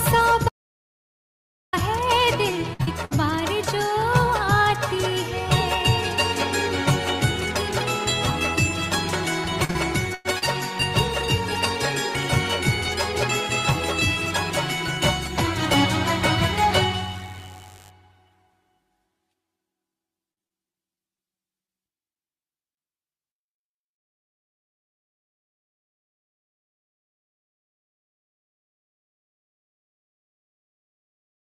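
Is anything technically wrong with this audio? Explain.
Yes. From 0.49 to 1.73 s the audio drops out to dead silence for about 1.2 s, with no room tone. The input was likely lost while the recorder kept writing silence.

Bursts of packet loss hit at 2.73 to 2.81 s and 3.05 to 3.13 s, each about 60 ms. The last sound is held and fades before the audio resumes further on.

Between them, at 2.83 to 2.89 s, a short concealed packet loss patches about 40 ms, leaving a brief smear.

Repeated packet loss gives a choppy, robotic sound at 9.65 to 10.44 s, with four holes, the longest about 99 ms. It recurs at 20.32 to 22.80 s as eleven shorter holes of up to 50 ms.

From 14.0 to 17.9 s there is mains buzz, a raspy 50 Hz buzz about 30 dB below the signal. Switching spikes spread its harmonics upward.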